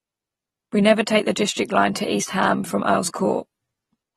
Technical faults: AAC compression

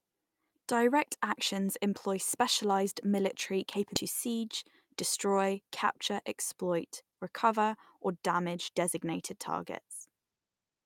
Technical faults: skip ahead; jitter buffer speed-up

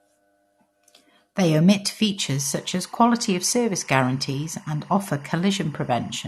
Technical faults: timecode bleed

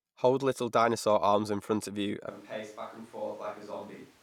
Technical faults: switch to a distant microphone

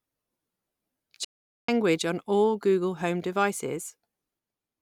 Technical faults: playback stall

